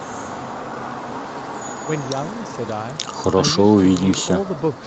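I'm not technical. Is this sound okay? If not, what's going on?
Yes, nothing stood out as a problem when listening to this speech recording.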